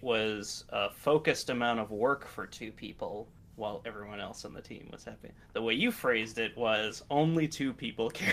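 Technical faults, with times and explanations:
2.62 to 3.13 s, drift correction step: playback jumps about 5% fast, lifting pitch nearly a semitone (90 cents), then snaps back, likely clock-sync software draining its buffer.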